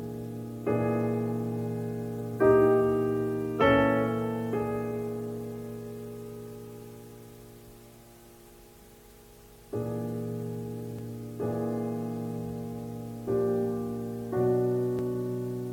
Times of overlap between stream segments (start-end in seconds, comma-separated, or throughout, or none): 10.99, 14.99